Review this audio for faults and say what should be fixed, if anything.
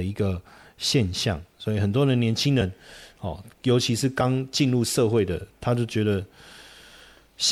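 At 4.2 s the speech jumps ahead by about one 26.1 ms frame: compressed frames skipped. Prevent it by checking file integrity and repairing corrupt frames before decoding.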